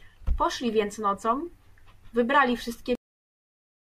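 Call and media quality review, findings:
Speech stops abruptly mid-sound at 2.95 s, then flat digital silence for the remaining ~0.97 s, no decay. Cut-off end: final buffers never written or played out, likely capture or encoder flush dropped at stream close.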